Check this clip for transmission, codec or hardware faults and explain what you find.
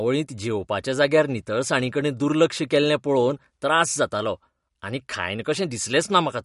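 One codec fault runs through the whole clip. The speech shows plainly audible damage consistent with MP3 compression, likely from a low bitrate near 52 kbps. Nothing remains above 11.2 kHz, so the treble stops at a hard ceiling. The encoder had too few bits. It cut the top band and dropped weak frequency lines. Those lines flicker on and off between frames. The result is a watery, swirling texture, with metallic chirps on s sounds and smeared consonant onsets.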